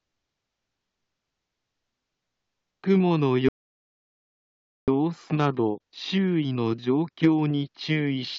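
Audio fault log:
3.49–4.88 s, rebuffering stall: the sound halts abruptly and about 1.4 s of silence follows before playback picks up at exactly the point where it broke off. The player had used up its downloaded audio and waited for more data, so nothing is skipped and the timeline simply stretches by that gap. A dropout or lost packet would remove material and jump ahead; here the sound before and after the pause joins seamlessly.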